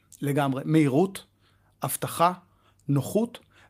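No technical faults are audible anywhere in this speech recording.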